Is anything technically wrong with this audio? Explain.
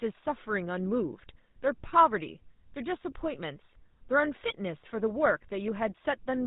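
Yes, the speech has been through a GSM full-rate codec the whole way through. It's a pulse-driven vocal-tract model with a hard 4 kHz ceiling, so everything sounds plainly buzzy, gravelly and muffled.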